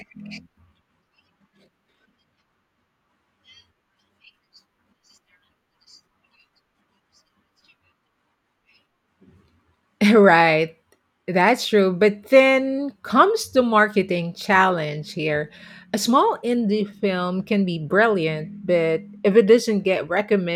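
No technical faults occur at any point in the recording, so there are none to describe in time order.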